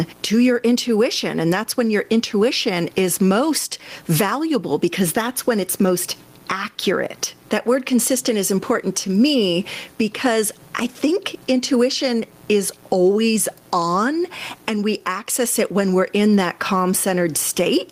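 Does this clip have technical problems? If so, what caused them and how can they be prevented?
Yes: gain pumping throughout, the background swelling between phrases and ducking by around 15 dB under speech, likely from excessive input gain hitting a fast limiter. Set microphone gain lower and use gentler compression.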